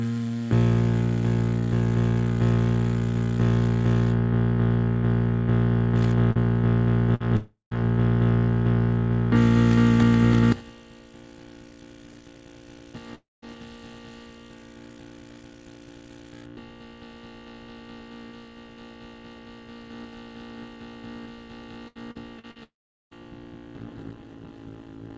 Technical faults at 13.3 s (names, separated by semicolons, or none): long network dropout